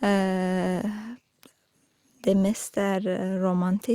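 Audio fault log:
No faults detected.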